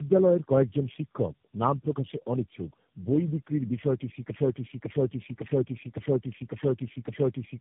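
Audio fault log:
Throughout: tandem speech coding, four low-rate speech codecs in a row re-encoding degraded output, so speech sounds rough, muffled and warbly; spectrogram shows nothing above 3.7 kHz, smeared harmonics.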